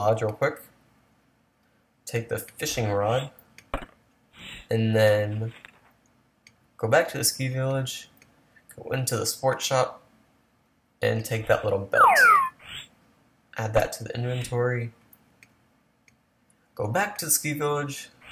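No technical faults can be heard anywhere in the audio.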